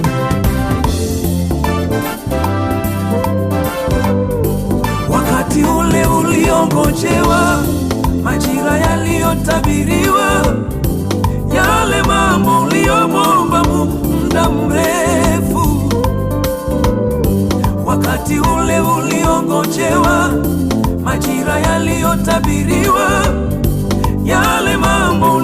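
Nothing goes wrong anywhere in this one; the audio just runs along without a single technical hiccup to point at.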